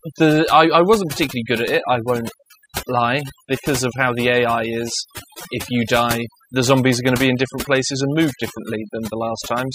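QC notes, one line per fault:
Throughout, overdone noise removal: aggressive noise reduction mutes frequency bands near the noise estimate, leaving near-silent gaps with twinkling specks.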